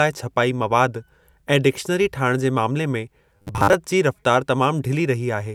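Audio in this speech clip likely stopped reaching the output often enough between 3.37 and 3.74 s, so the playback side kept refilling the gap by replaying its last short buffer instead of the skipped audio. For most of that stretch the sound is made of these repeats, about every 10 ms, which locks it to a 100 Hz buzz. The result is robotic sound from repeated short buffers: a stiff, metallic drone that only loosely follows the speech underneath.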